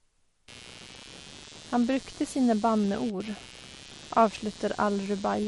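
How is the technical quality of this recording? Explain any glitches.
The technical quality is poor, with two distinct faults.

Throughout the speech there is plainly audible MP3 compression, likely the cause of the dull, swirly character. Nothing is present above 11.2 kHz, where the encoder cut off the treble to save bits. Weak frequency components drop in and out between frames, giving a watery texture on sibilants and smeared consonant onsets. The amount of damage fits a low bitrate of around 48 kbps.

From 0.48 s to the end, computer activity noise sits under the speech. It is a buzzing pulse at roughly 150 per second, about 20 dB below the speech. The buzz comes from processor or peripheral load currents shifting the ground that the audio circuit shares with the computer. It follows the machine's activity rather than the talker, so it continues through pauses.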